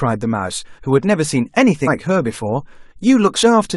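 Compressed frames skipped twice: whole frames were missing or refused by the decoder, so the speech jumps forward. At 1.86 s roughly a seventh of a second vanishes, and at 3.42 s about a tenth.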